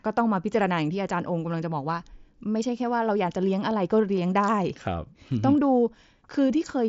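Speech carried over a wideband Bluetooth headset link, with nothing technically wrong to report.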